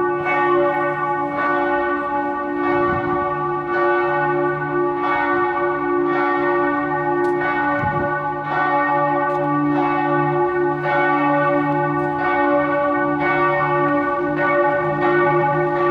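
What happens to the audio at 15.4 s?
At 15.4 s the sound sits inside a time-stretched section running from 14.13 s to the end, likely software compression to 1.67 times speed; it sounds rushed, yet pitch stays unchanged, unlike a simple speed-up.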